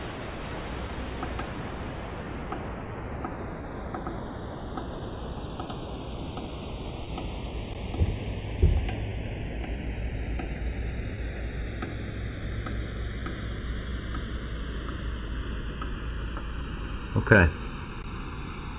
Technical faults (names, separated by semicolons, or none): channels drifting apart; clock drift between sender and receiver; repeated timing corrections; scattered short gaps